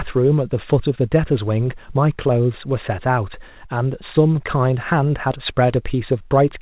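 No faults turn up anywhere in this speech; it simply has the narrow-band sound of a call carried over G.711, with nothing above 4 kHz.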